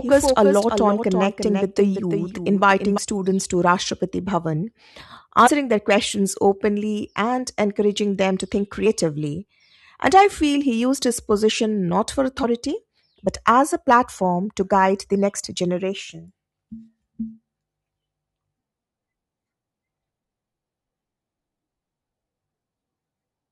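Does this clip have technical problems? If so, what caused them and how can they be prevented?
Yes. A doubled audio track runs from the start to 2.98 s: a full-band copy about 5 dB quieter trails roughly 0.3 s behind, likely from a second capture path. A spectrogram shows every onset twice, and the echo stops abruptly. To prevent it, make sure only one input path feeds the mix, and mute any monitoring or loopback route.

Compressed frames were skipped at 5.46–5.48 s (just before "their questions openly and"), 8.85 s (after "encouraging them to think") and 12.43 s (after "his position not for"). Each jump drops several 23.2 ms frames, roughly 70 to 100 ms of audio. To prevent it, use reliable storage and transfer with error checking so that no frames are lost or corrupted.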